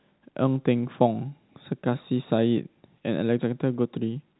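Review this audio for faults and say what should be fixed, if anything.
Nothing needs fixing: the speech comes through G.711 telephone coding with nothing above 3.9 kHz, which fits a 64 kbps A-law telephone path, and no faults are present.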